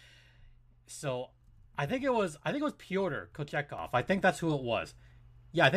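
Speech, and at 3.79 s the level leaps up by about 8 dB in a single step and stays there to the end, background noise rising right along with the voice. That's a sudden gain jump, likely a gain setting applied instantly with no ramp.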